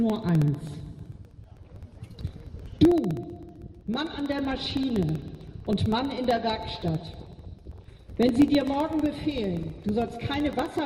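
Something in the playback or capture chain is stalling the USB bus or audio driver at a fixed 64 ms interval, producing periodic USB or driver dropouts from 0.10 s to 10.79 s. Each stall loses about a millisecond of audio, which is replaced by silence. The result is a steady tick roughly fifteen times a second, heard as a fine, even rattle riding on the sound and audible only where there is signal.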